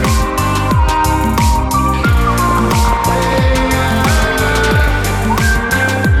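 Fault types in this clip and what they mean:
DAB burbling: A bubbling, squelchy warble with brief chirps rides over the sound in three bursts, from 2.39 to 3.39 s, 4.12 to 5.11 s and 5.73 to 6.00 s, the first being the roughest. Weak reception lets bit errors, at a rate under one percent, slip past the error correction into the MP2 data. Corrupted samples put short noise blips in single sub-bands, and corrupted scale factors make sub-bands leap in level for up to a frame, across 42, 42 and 12 frames in the three bursts.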